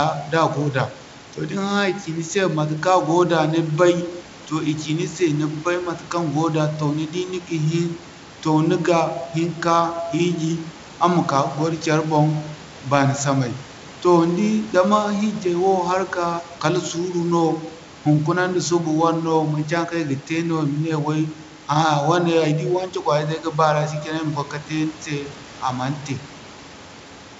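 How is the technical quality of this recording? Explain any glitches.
No glitches to report: room background sits about 23 dB below the speech, and the band stops near 7.7 kHz, consistent with G.722 wideband telephone coding at 64 kbit/s, with at most a faint coding texture.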